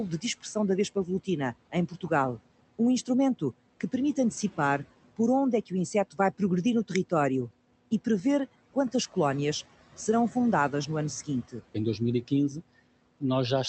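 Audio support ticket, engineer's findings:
Noise suppressor artifacts, throughout: the room noise, sitting about 20 dB below speech, is pulled down by about 18 dB in the gaps and returns under speech. Per-band gains switch frame to frame. Probable component: the suppressor stage.

Speech cut by the noise suppressor, 1.72–2.11 s, right after "dispersão da vespa volutina": the suppressor misjudged low-level speech energy as noise and attenuated it by as much as about 12 dB. Roughly a tenth of a second in total sounds swallowed or faint.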